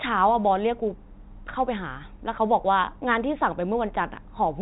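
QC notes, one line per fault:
No faults found in this speech clip. The G.711 telephone coding is audible as a band limit with nothing above about 3.8 kHz, and its quantisation noise is faint at most.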